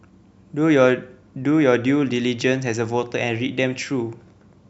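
No technical faults can be heard anywhere in this recording.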